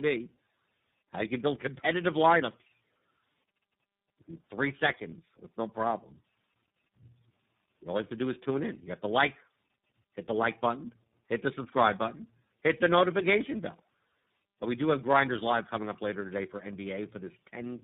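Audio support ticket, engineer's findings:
Tandem speech coding, whole clip. Speech rough, muffled, warbly. Nothing above 3.8 kHz. Symptom points to three speech codecs in series, likely GSM full rate, CVSD, then iLBC, bridged by G.711 mu-law legs. Each border decodes and re-encodes. Every coder compresses the previous coder's damage. Artefacts stack.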